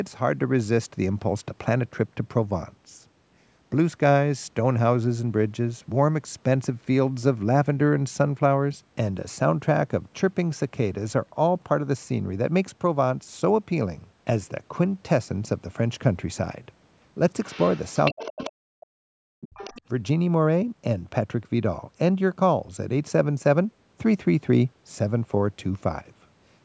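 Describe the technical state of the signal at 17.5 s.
At 17.5 s you're right inside a stretch, from about 17.45 to 18.51 s, where the other side's voice is leaking through. A second, fainter talker sits under the main speech, roughly 15 dB down. The likely cause is the talker's loudspeaker feeding back into the microphone with the echo canceller failing to strip it all out, so that bit of far-end audio rides along. The call path's normal 8 kHz top end applies to it too.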